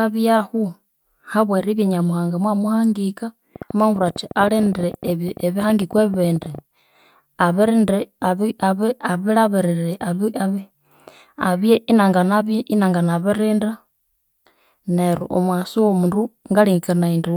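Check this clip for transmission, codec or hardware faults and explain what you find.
One fault is present: a train of clicks from 3.56 to 6.59 s. Around forty similar clicks arrive unevenly, about 12.9 per second. They peak about 5 dB above the speech. The likely cause is interference or a faulty connection or power supply injecting pulses. They sound like rough ticking over the speech.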